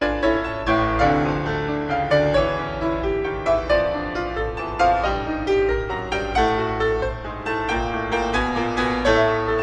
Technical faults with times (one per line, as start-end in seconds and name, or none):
none